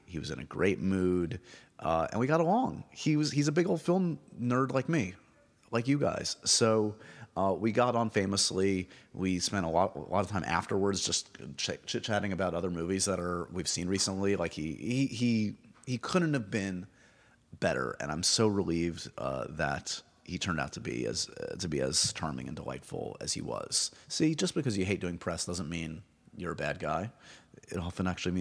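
No technical faults are audible.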